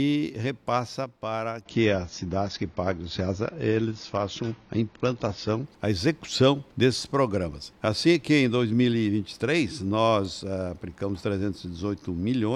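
From 1.64 s to 5.64 s the stream switches down to a lower-bitrate version. The change is abrupt, with no gap. Nothing is left above about 7.1 kHz, so the top end sounds dull and grainy. This fits a step down to roughly a quarter of the bitrate.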